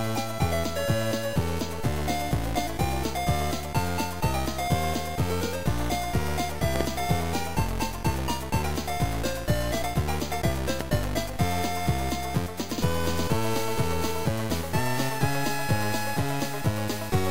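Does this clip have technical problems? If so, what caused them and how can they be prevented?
Yes: double loud pops at 6.76–6.83 s and 10.81–11.06 s, likely voltage spikes from a connector or static. They show as tall waveform spikes and full-height spectrogram streaks. Secure cables and ground equipment to prevent them.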